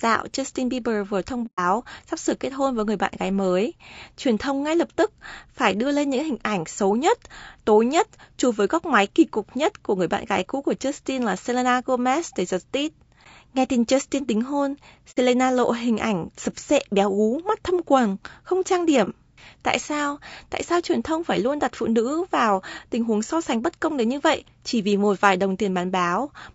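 Throughout the speech there is a rough, grainy texture, with noise filling the gaps between pitch harmonics and a thin, synthetic-sounding top band. This is plainly audible codec damage, most likely from low-delay AAC compression, the AAC-ELD type used for video calls, at a rate that points to about 32 kbps.

AAC frame loss with muting cuts two soft-edged holes and one brief dip into the speech. The first runs from 1.46 to 1.60 s, after "vừa thông" and before "sắp sửa kết hôn". The second runs from 15.11 to 15.17 s, between "tính hôn" and "lộ hình ảnh sập". The third runs from 19.04 to 19.09 s, after "thâm quầng không trang". Their lengths, about 120, 60 and 30 ms, fit runs of several, two and one lost frames. The decoder zeroed those frames, so the overlapping windows fade the sound down and back up.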